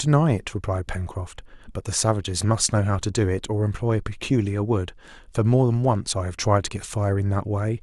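No technical faults are audible.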